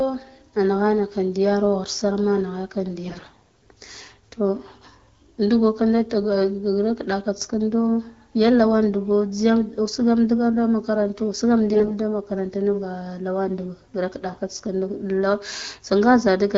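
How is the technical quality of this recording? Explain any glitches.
Two brief stretches of AMR bit errors break up the speech, heard through an AMR-WB HD Voice channel with its top near 7 kHz. From 3.05 to 3.54 s (about 15% of bits flipped) and 11.74 to 11.94 s (about 20%), corrupted frame details misplace pulses and skew gain and spectrum, so the sound turns scratchy and gargly. A spectrogram shows smeared, noisy harmonics, and the waveform looks ragged at roughly steady level.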